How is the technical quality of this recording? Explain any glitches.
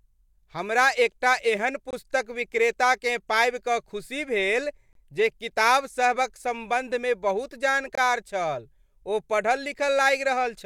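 The recording has one recurring glitch: three short dropouts spaced evenly through the speech.

Gap between chunks, at 1.91–1.93 s (between "हमरा एकटा एहन" and "विक्रेताकेँ पाबि"), 4.93–4.95 s (after "खुशी भेल") and 7.95–7.98 s (after "सम्बन्धमे बहुत"). The audio appears to have been delivered in 3.0-second pieces, with about 23 ms of silence inserted at each join. Nothing is missing from the speech, but each join sounds like a brief hole with abrupt edges, recurring at a regular 3-second rhythm.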